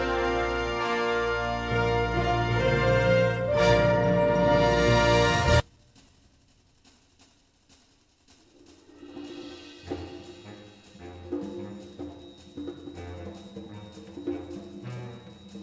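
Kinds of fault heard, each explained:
Skip ahead: At 5.6 s the audio jumps forward with no gap. About a second and a half of sound is missing because it was dropped while later audio was already queued. The two sides are joined almost directly, so the cut is abrupt.
Jitter buffer speed-up: From 5.69 to 7.64 s the audio plays about 10% fast at unchanged pitch. The buffer held more audio than it aims for, so the receiver trimmed short pitch-period pieces, roughly a fifth of a second in total. This makes the passage sound hurried.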